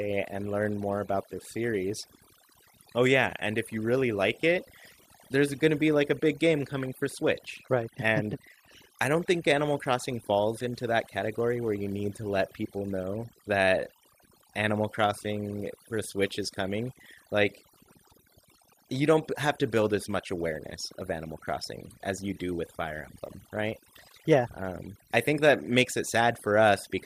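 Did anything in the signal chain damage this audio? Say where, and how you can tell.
Yes: overdone noise removal in processing throughout. Bands near the noise estimate are cut, taking quiet parts of the voice with them and leaving twinkling near-silent gaps and spectrogram holes.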